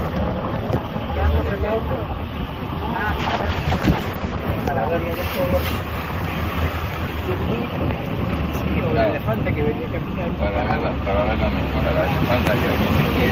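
From 3.22 s the audio turns rough and muffled, with the top end gone above 8 kHz where it had reached 20 kHz. It stays at its worst for about 1.2 s and clears by 4.51 s. This is a call bitrate drop: the encoder was handed far fewer bits, which fits a fall from around 32 kbps to around 11 kbps. It coded more coarsely and narrowed its bandwidth until the rate recovered.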